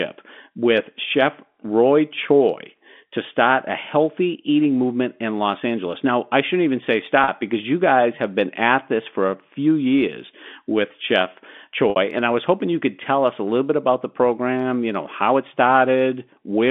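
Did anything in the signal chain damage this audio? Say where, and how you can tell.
Yes. The damage is in the network stage: packet loss with pitch repetition. At 7.24 s the speech briefly holds a buzzy, repeated pitch period for about 40 ms, which fits two lost 20 ms packets. At 11.9 s the same effect lasts about 60 ms, which fits three packets. The receiver repeats the last pitch period to cover each gap and fades it out. The narrow 200 Hz to 3.5 kHz band of the G.711 telephone coding is not part of the fault.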